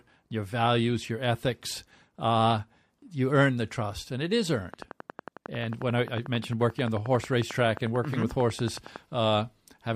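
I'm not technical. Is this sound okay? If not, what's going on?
No. From 4.74 to 8.97 s there is a train of clicks. It sounds like steady ticking, about 11 clicks a second, roughly fifty in all. They are louder than the speech. The likely cause is interference from nearby equipment or a faulty connection or power supply.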